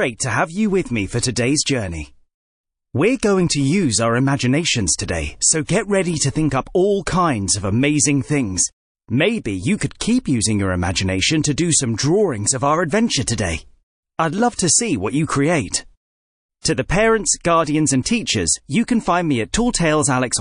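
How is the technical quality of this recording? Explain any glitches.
The technical quality is poor. Codec damage is plainly audible throughout, and several attacks are smeared.

MP3 compression affects the whole speech clip. The sound is watery and swirly, and s sounds chirp metallically. This is likely from MP3 encoding at a low bitrate, which fits around 40 kbps. With so few bits, the encoder drops weak frequency lines, and they flicker on and off between frames.

Pre-echo appears six times: at 5.65 to 5.68 s, at 6.50 s, at 9.77 to 9.81 s, at 14.56 to 14.59 s, at 16.61 to 16.65 s and at 18.03 to 18.06 s. Each sharp onset is preceded by a brief hiss, up to 37 ms long and about 12 to 35 dB above the quiet before it. The encoder kept 52 ms blocks and never switched to short ones. The noise sized for each attack therefore spread into the silence ahead of it.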